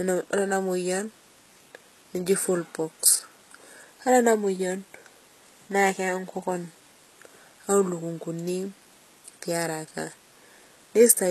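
Low-bitrate audio saved at a high bitrate, throughout: speech stops at 12.4 kHz with earlier coding artefacts intact, likely a low-bitrate encode resaved as MP3.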